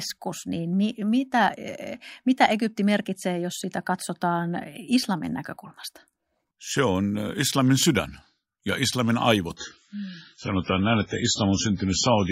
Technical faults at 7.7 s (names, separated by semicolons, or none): none